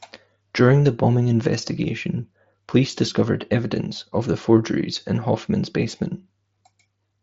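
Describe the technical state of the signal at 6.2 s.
At 6.2 s the speech is intact, carried through the Bluetooth mSBC headset codec path with its band limit near 7.7 kHz, and no fault occurs at that moment.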